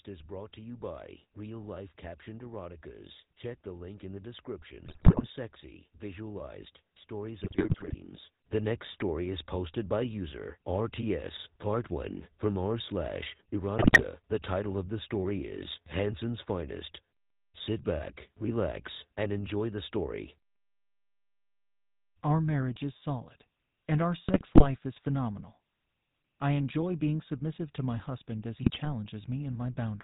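The whole clip has passed through the GSM full-rate codec, whose sound fits the 13 kbps full-rate coder. Instead of storing the waveform, it models the vocal tract and excites that model with regularly spaced pulses, keeping only one excitation sample in three, with nothing above 4 kHz. The damage is plainly audible throughout: the speech carries a buzzy, gravelly roughness and a band-limited, telephone-like dullness.

GSM bit errors then strike five times, at 4.86 to 5.29 s, 7.44 to 7.95 s, 13.78 to 14.05 s, 24.28 to 24.66 s and 28.62 to 29.06 s. In each stretch, flipped bits on the radio link corrupt the filter, pitch and gain values the decoder relies on, so the spectrum warps or the level jumps frame after frame until the bad patch clears. The speech breaks into squawks, pops and gargling for those few tenths of a second each time.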